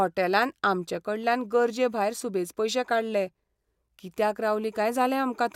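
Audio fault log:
No audible faults detected.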